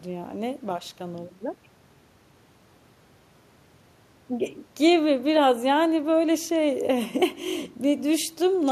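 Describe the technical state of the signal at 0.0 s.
The signal at 0.0 s is intact, with no technical fault present at that moment.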